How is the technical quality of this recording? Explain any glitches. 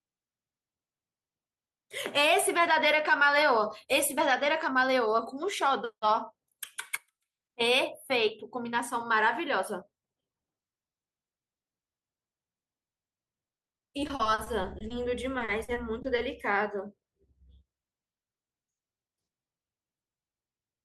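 Two bursts of repeated packet loss (robotic sound) break up the speech, at 13.47–14.92 s and again at 15.38–16.20 s. In each stretch, audio arrives with holes up to 40 ms long, and each hole is filled by extending the sound just before it. About 30% of the first stretch and 20% of the second is patched this way. The result is choppy speech with pieces missing. On a spectrogram, this shows as harmonics frozen in short flat blocks with abrupt vertical seams. The waveform shows repeated, copy-like cycles between sudden jumps.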